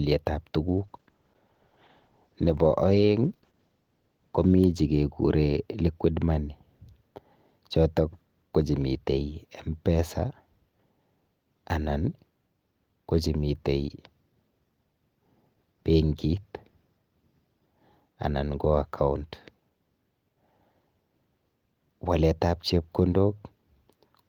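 Speech, with a call bitrate drop from 0.68 to 4.61 s: the sound turns coarse and muffled, fitting about 32 falling to 14 kbps, then clears, unlike dropouts from packet loss.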